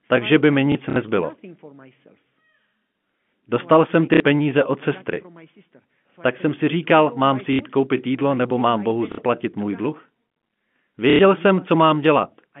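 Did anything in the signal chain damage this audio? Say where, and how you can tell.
Yes, at the network stage: packet loss with the last packet repeated. The receiver replayed the previous packet to fill each gap, which produces a short robotic stutter at 0.72–0.96 s (just after "by mi"), 4.14–4.2 s (before "peníze od sestry"), 7.53–7.59 s, 9.12–9.18 s (before "můj dluh") and 11.1–11.19 s. The repeats buzz at about 33 Hz, which fits 30 ms packets.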